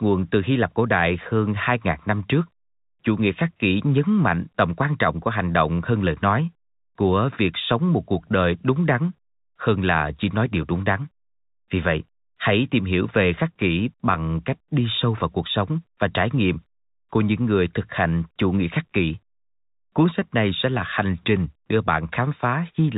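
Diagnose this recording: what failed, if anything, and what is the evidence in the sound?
Nothing failed; the telephone-band speech sounds as expected.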